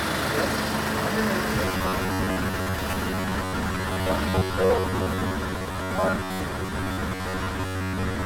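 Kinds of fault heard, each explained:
Robotic sound from repeated short buffers: from 1.65 s to the end, the sound goes hard and metallic with a fixed 93.8 Hz buzz. Likely new audio arriving too slowly, so about half the time gets filled by looping the last roughly 11 ms slice.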